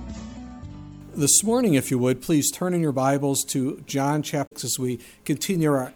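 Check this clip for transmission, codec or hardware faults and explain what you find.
One codec fault is audible. From 4.43 to 4.52 s a brief garbled blip cuts through the sound: damaged data in a compressed stream, where corrupted bytes make the decoder misread frames and lose sync until it finds the next frame header.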